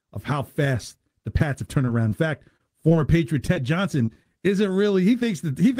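From about 1.85 s to 4.41 s you get scattered short gaps, roughly ten of them, none longer than about 30 ms. It sounds like a handful of packets went missing or turned up late, about 180 ms of audio in all, and the receiver covered each hole by stretching the last bit of sound. That's why the speech stays clear but picks up little ticks, smears and hiccups through that stretch.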